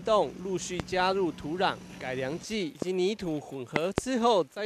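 Sharp loud pops land on top of the sound at 0.80 to 0.82 s, 2.82 to 2.84 s, and a double pop at 3.76 to 4.00 s, peaking roughly 15 to 25 dB above the signal, likely from sudden voltage pulses.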